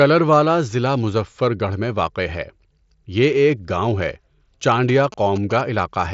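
A nearby 2G phone's GSM signalling bursts are rectified into the audio from 4.89 to 5.61 s, giving a galloping dit-dit-dit of short 217 Hz buzzes.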